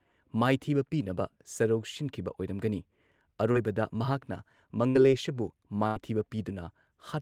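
At 3.51 s a short concealed packet loss leaves about 40 ms of speech missing. The receiver extends the preceding sound and blends back, giving a brief smear or wobble. It is distinguished from a burst by being too short to fade.

Bursts of packet loss follow at 4.89–4.97 s and 5.87–5.97 s, dropping about 60 and 80 ms. The concealment holds the last sound as a buzz or hiss that dies away, then speech resumes with audible material skipped.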